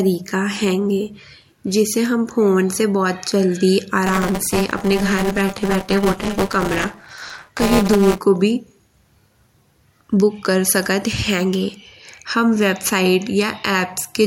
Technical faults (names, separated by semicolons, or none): buffer tearing